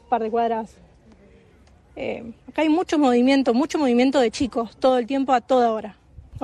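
From start to finish the audio carries plainly audible damage, likely from MP3 compression at a rate that fits about 64 kbps. Weak detail flickers in and out, leaving a watery swirl. That flickering distinguishes it from a simple low-pass filter.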